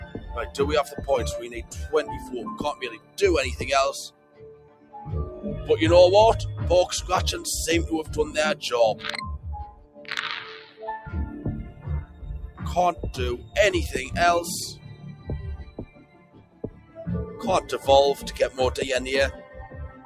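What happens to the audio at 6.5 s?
At 6.5 s, as throughout the clip, a noise suppressor applied to music or sounds is treating sustained tones and decay as noise and pulling them down by around 15 dB, so attacks pass while held parts and tails sink, leaving the sound pumping and thinned.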